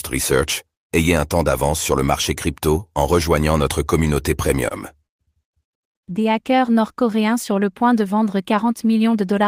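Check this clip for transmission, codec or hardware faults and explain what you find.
Three kinds of network-timing fault are audible, all from how the receiver's jitter buffer handled late and bunched packets.

At 4.68 to 4.73 s and again at 5.06 to 5.12 s, the speech hangs on a sound slightly too long, with a faint buzz. These are short stalls from a late packet: the buffer ran dry, so the receiver stretched the last sound for 18 ms and then 29 ms until the packet arrived. Nothing was lost, but delay grew by those amounts.

From 6.43 to 7.12 s the speech drags and sounds drawn out, at 94% speed with unchanged pitch. This is a jitter buffer slow-down. With its reserve running low, the receiver repeated single pitch periods and bits of pause, adding 49 ms to rebuild the buffer.

From 9.14 s to the end the speech turns hurried, running at 112% speed at the same pitch. This is a jitter buffer speed-up. 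The buffer held more audio than its target, so the receiver trimmed short pitch-period pieces in succession, about 50 ms in total, to cut the delay.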